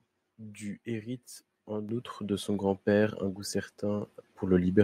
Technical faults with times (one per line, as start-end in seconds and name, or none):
1.89 microphone volume stepped up
4.05 microphone volume stepped up